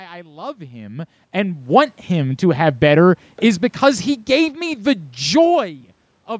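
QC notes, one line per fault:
1.31–2.83 s, automatic gain rising: Just after "I love him", the speech and the room noise behind it swell together by about 6 dB over roughly a second and a half. The automatic gain control judged the input too quiet and raised its gain gradually.
2.82–5.73 s, automatic gain falling: Straight after that rise, the speech and its background sink together by about 4 dB across nearly three seconds. The automatic gain control now judged the level too high and eased its gain down slowly, pulling the room noise down with it.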